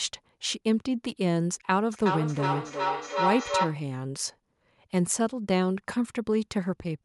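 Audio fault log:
1.92–3.91 s, feedback howl: a tone of around 1 kHz swells out of the speech, repeating roughly every 400 ms and peaking within about 1 dB of the speech level. Two devices in the same room share the call, so sound leaves one loudspeaker, enters the other microphone and returns louder each trip. The loop's favoured frequency wins out, and its round-trip delay sets the spacing of the repeats.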